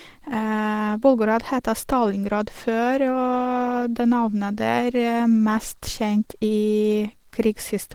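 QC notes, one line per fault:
Throughout, Opus compression. The speech sounds hoarse, rough and grainy, and the damage is plainly audible. Content still reaches about 20.2 kHz. This is likely Opus running its hybrid speech mode at a low rate, fitting 16 kbps, with detail replaced by noise.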